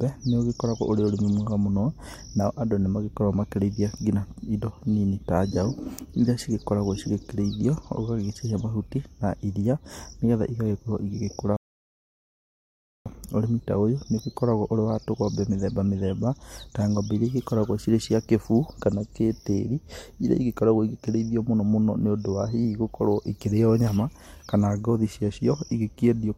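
A rebuffering stall interrupts this speech recording from 11.57 to 13.06 s: playback runs out of downloaded audio, falls silent, then resumes exactly where it stopped, adding about 1.5 s.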